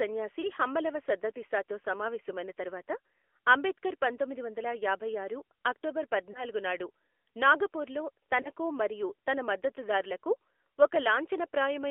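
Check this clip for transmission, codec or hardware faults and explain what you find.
Two faults are present: AMR narrowband mobile codec coding across the whole clip, and three lost AMR speech frames.

AMR narrowband mobile codec: the speech sits in a 300 Hz to 3.4 kHz band, so a spectrogram shows nothing above 3.4 kHz and an empty floor below 300 Hz. The vocal-tract model with sparse pulse excitation leaves plainly audible buzzy, synthetic speech, which fits a mid mode around 10 kbps.

Lost AMR speech frames: brief dips or warbles at 0.42, 6.32 and 8.42 s, each consistent with one missing 20 ms frame. The decoder repeated the previous pitch and vocal-tract settings with falling gain, so the waveform briefly sags and a spectrogram shows smeared, fading harmonics before the speech recovers.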